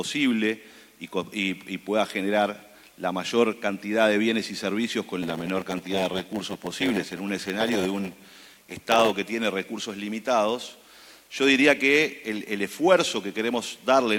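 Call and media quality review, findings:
Steady 100 Hz buzz over the sound, 5.22 to 9.12 s, with playback dragging to 0.919x speed while pitch holds. Block size mismatch (padded) between stages: short 9.2 ms blocks zero-filled to the reader's size, inserting a gap every block.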